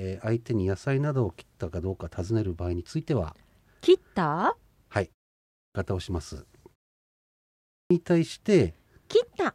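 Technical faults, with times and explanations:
5.37 s and 7.49 s, clipped start after a pause: after gaps of 0.31 s and 0.82 s the output device has gone to sleep and is slow to wake, so about 0.38 s and 0.42 s of speech get swallowed and the speech resumes abruptly, missing its opening sounds.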